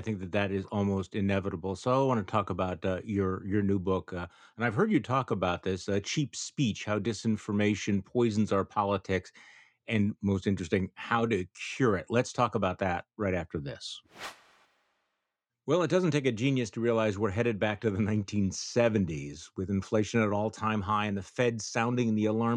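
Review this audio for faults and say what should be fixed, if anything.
No faults turn up in the audio, so nothing needs to be fixed.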